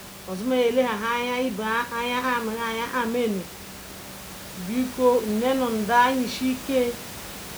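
Speech recording with no technical faults to report.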